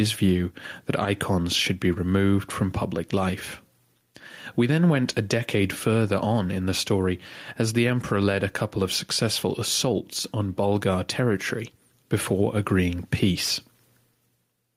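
Gain pumping runs through the whole speech clip: the gain ducks by roughly 5 dB under every loud syllable, leaving the level squashed. The likely cause is gain set far too high feeding a fast limiter. A waveform shows flattened peaks and the level rising again between phrases.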